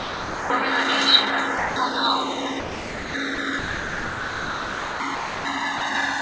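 The two channels of this recording of everyday sounds come from devices running on separate clocks, off from each other by a couple of hundred parts per million, so the delay between them keeps growing, to around a millisecond and a half by the end. This is channels drifting apart. Summed to mono, the comb-filter notches sweep slowly through the spectrum, giving a slow flanging across the whole clip. The sound also drops out seven times, likely because a voice detector took it for background and stopped sending, so the receiver filled the gaps with comfort noise. This is sound dropped by the voice detector, heard as the audio giving way to steady noise at 0 to 0.5 s, 1.58 to 1.76 s, 2.60 to 3.14 s, 3.35 to 3.38 s, 3.59 to 5.00 s, 5.15 to 5.45 s and 5.78 to 5.81 s. The longest gap lasts about 1.4 s. The call path's codec passes nothing above 8 kHz, which fits G.722 at 64 kbps.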